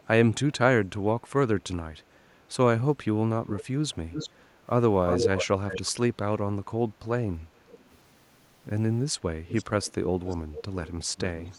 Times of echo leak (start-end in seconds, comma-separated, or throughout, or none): 3.47-3.65, 4.10-4.30, 5.06-5.92, 7.68-7.97, 9.47-9.93, 10.26-11.59